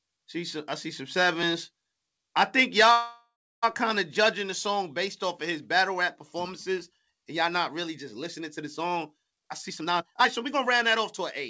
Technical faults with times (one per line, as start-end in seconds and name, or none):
2.92-3.64 call audio freeze
9.30-11.21 jitter buffer speed-up